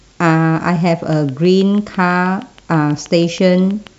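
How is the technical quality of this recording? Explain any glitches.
The recording has one clear glitch: a train of clicks. It runs from 1.13 s to 3.88 s. About twenty sharp clicks arrive at a steady 6.2 per second. They are roughly as loud as the speech itself. Each click has much the same shape, so they sound like a mechanical ticking laid over the talking and the gaps alike. A repeating pulse this regular likely comes from electrical interference from nearby equipment or from a faulty connection or power supply.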